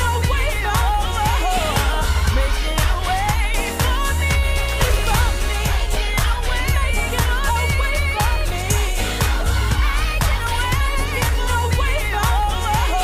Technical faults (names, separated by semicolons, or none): skip ahead